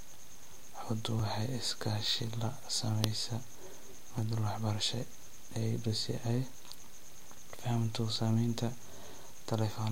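Regular ticks cut through the speech once every 1.00 s, from 0.19 s to 9.16 s, about ten in all. These are periodic USB or driver dropouts: something stalls the audio path at a fixed interval, and roughly 2 ms is skipped each time, leaving a hard splice.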